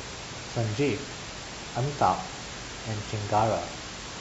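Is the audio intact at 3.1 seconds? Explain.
Yes, the audio is intact at 3.1 seconds, with only the room's own background noise sitting about 10 dB below the speech, as it does in the recording itself.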